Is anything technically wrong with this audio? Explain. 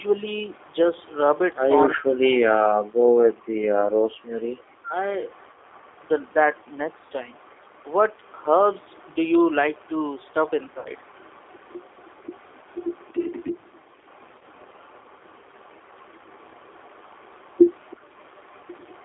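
Yes. The clip has four separate problems: narrowband codec damage throughout, a faint early echo, two stretches where the talker is pushed down, and two short dropouts.

Throughout the clip the speech sounds boxy, slightly rough and synthetic, with nothing below about 300 Hz or above about 3.6 kHz. This is the G.729 codec, here the G.729A variant at 8 kbit/s. It does not send the waveform. It sends a vocal tract filter, a pitch predictor and a few pulses per frame, and the decoder rebuilds the speech from those. That rebuilding is where the buzzy, artificial texture comes from, and here it is plainly audible.

From the start to 1.55 s there is a very faint, delayed copy of the voice trailing about a third of a second (334 ms) behind, sitting roughly 35 dB below the speech. This is an echo leak. The likely cause is a far end on a loudspeaker whose echo canceller did not fully remove what its microphone picked up, so a residue was sent back down the line.

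From 1.94 to 2.88 s, and again from 3.97 to 4.98 s, the voice sinks sharply and in places nearly vanishes, with the deepest dips around 40 dB. About 0.7 s of the first stretch and about 1 s of the second are affected. This is speech suppressed in double talk. Both sides were likely talking at once, and the echo canceller, unable to tell the talker from loudspeaker echo, turned everything down.

At 10.79 to 10.90 s and at 14.39 to 14.43 s the speech briefly smears into a buzzy tone or coloured noise that fades before recovering. This is VoIP packet loss concealed by the speech codec. The first gap is 60 ms, which fits three lost 20 ms packets, and the second is 20 ms, which fits one. The decoder filled each gap by extrapolating its last pitch and filter while lowering the gain. Because each frame builds on the last, the sound stays weak or coloured for a moment after real audio returns.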